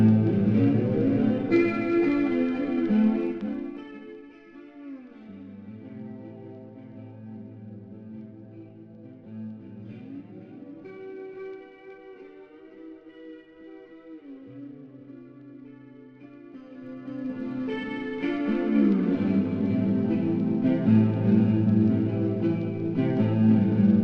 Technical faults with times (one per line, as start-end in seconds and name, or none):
3.18-4.27 zipper noise
16.51-17.57 zipper noise